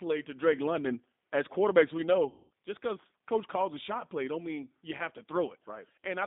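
The whole clip runs through the G.729 codec at 8 kbit/s, so the speech sits in a narrow phone band of about 200 Hz to 3.7 kHz and has that slightly rough, synthetic edge you get when a codec rebuilds the voice from a vocal tract filter and a few pulses per frame.

Then from 2.30 to 2.51 s, right after "quarterbacks we", there's VoIP packet loss concealed by the speech codec. About 200 ms of audio goes missing, which fits roughly twenty lost 10 ms frames. The decoder keeps stretching its last pitch and filter into a buzzy tone or coloured noise that fades. The voice stays a bit weak and smeared for a moment after it comes back with "just because coach calls".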